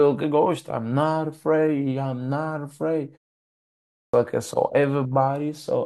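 At 3.91 s, after a 0.82 s pause, the output device had gone to sleep and needed time to wake, causing a clipped start after a pause. The first 225 ms of speech, up to 4.14 s, is lost, so the next word bursts abruptly out of silence without its opening sounds.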